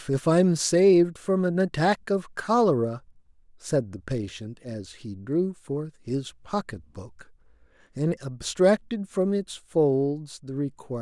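Speech recording with no audible technical faults anywhere in the clip.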